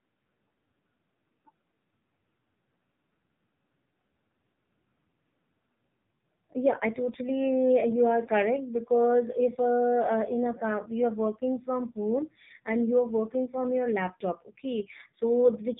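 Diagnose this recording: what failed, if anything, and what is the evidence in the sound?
The speech passed through the codec stage as AMR narrowband mobile codec audio, coded at a very low rate throughout the clip. Its 8 kHz sampling removes everything above about 3.8 kHz, so the sound is dull and boxed-in. The coder rebuilds the voice from a vocal-tract model excited by a few pulses in each 5 ms. So few bits leave it heavily buzzy and synthetic, which fits one of the lowest AMR-NB modes, around 5.9 kbps.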